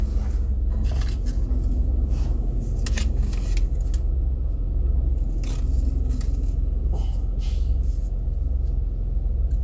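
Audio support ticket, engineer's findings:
Listened through the whole clip of sounds and nothing stood out, so no findings to log on this one.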